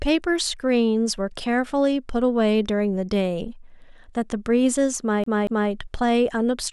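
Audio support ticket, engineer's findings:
CD stuck on one turn: disc scratch knocks the laser back one track each revolution, 5.24 to 5.71 s. Same 0.23 s of speech replays twice, brief mute at each jump. Audible as a fast, even skipping-CD stutter.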